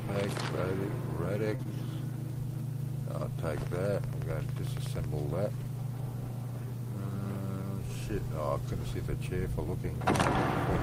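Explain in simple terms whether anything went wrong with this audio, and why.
Around 1.55 to 1.72 s, there's a short stall from a late packet. A piece of audio arrived late, so the receiver held the last sound for about 38 ms while it waited, then continued where it left off. Nothing is lost, but that moment drags slightly.

Within that same stretch, at about 1.63 to 1.67 s, there's also a short concealed packet loss. About 20 ms of audio never arrived in time, and the receiver patched the gap by extending the surrounding sound. It comes across as a tiny smear or wobble.

From 3.67 to 5.05 s there's a train of clicks, about 15 evenly spaced ticks at roughly eleven per second, each about as loud as the sound itself. The likely cause is interference from nearby equipment or a faulty connection or power supply.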